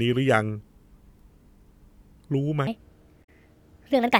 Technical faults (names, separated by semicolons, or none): section at the wrong speed; damaged data in a compressed stream